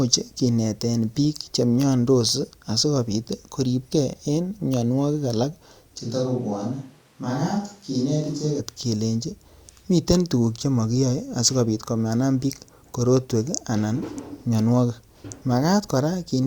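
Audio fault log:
6.03–8.59 s, switch to a distant microphone: right after "mianwogik alak che" the speech abruptly turns hollow and roomy, thinner in the bass and roughly 5 dB quieter, with room noise rising to about 35 dB below the speech. Full closeness returns suddenly at "kelenji miten tuguk che". The likely cause is the close microphone dropping out in favour of a farther one. On the waveform, a lower-amplitude block with hard edges. The spectrogram shows weaker low frequencies, reverberant smearing between syllables and a raised noise floor.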